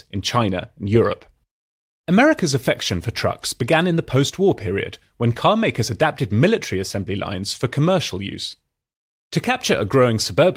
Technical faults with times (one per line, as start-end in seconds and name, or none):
none